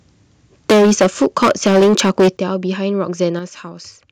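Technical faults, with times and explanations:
0.69–2.29 s, microphone overload: the loudest passages take on a harsh, crackling edge, with roughly a fifth of the waveform flattened about 15 dB past the converter's limit, likely from input gain set so high that the converter cuts off the peaks.
0.71 s, microphone volume stepped down: the level drops abruptly by about 2 dB, just after the distortion starts, likely the call software lowering the device's input gain in one step.
2.37 s, microphone volume stepped down: a larger sudden drop of about 9 dB follows the long distorted stretch, with the sound and background quieter together.
3.22–3.24 s, microphone overload: a brief crackle where a peak runs about 1 dB over the limit and around 5 percent of samples are clipped.
3.39 s, microphone volume stepped down: another one-step cut of about 6 dB soon after that peak, pulling the whole signal down at once.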